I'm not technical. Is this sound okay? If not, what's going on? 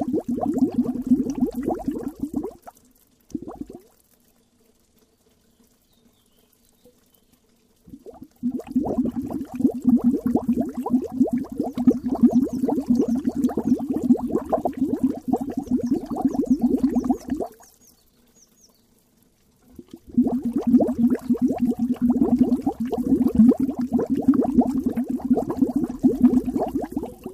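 No. Frames out of order: at 7.23, 8.88, 10.92, 13.06, 14.52 and 24.76 s, a split-second piece plays with its two halves swapped, causing a brief garbled flutter. Unlike a dropout, nothing is missing and no time is lost.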